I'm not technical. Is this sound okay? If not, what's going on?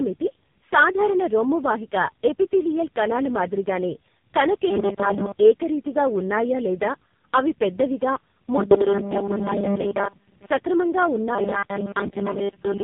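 No. Throughout, the call passed through three different speech coders in a row, each re-squeezing the last one's output. This is tandem speech coding, which leaves the speech rough, muffled and warbly, with nothing above 3.7 kHz. From 11.35 s to the end, the audio likely arrived too slowly, so the software kept replaying tiny 5 ms snippets. That robotic sound from repeated short buffers turns most of the speech into a rigid metallic 200 Hz buzz.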